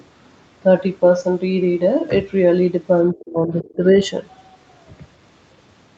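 Between 3.12 and 3.97 s, speech drops by about 30 dB in patches totalling roughly half a second. That's likely speech suppressed in double talk by the echo canceller.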